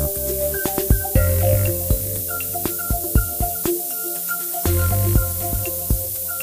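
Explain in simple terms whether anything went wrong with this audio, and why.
Low bit depth with noise shaping runs throughout: the sound is stored with only 4 bits, and the rounding error is pushed upward into a thin, hissy sizzle about as loud as the sound itself.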